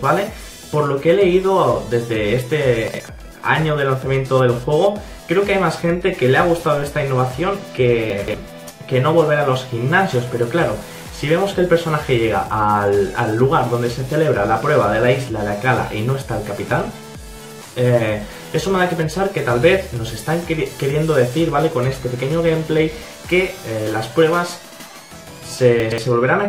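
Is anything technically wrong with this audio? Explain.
Yes. Chunks out of order occur at 2.88–3.0 s, 8.1–8.34 s and 25.8–25.98 s, where a 60 ms block plays one, three and two blocks late. The displaced sound leaves three hard joins, heard as a jumbled stutter. The waveform shows abrupt discontinuities, and the spectrogram shows thin vertical broadband lines.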